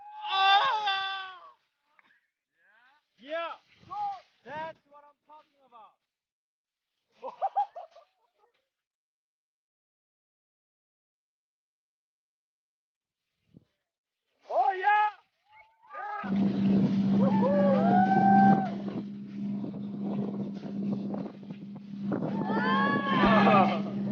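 From 14.84 s to 18.49 s the audio suddenly runs at about 140 percent of normal speed while its pitch stays unchanged, so that stretch sounds hurried and compressed. This is a jitter buffer speed-up: the receiver's buffer had built up more audio than its target, and to bring the delay back down it cut many short pitch-period-length pieces in quick succession, discarding roughly one and a half seconds of audio across the interval.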